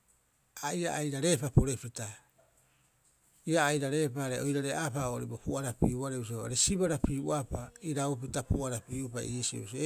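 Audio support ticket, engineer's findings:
Speech clip reviewed in full; no audible defect found, nothing to action.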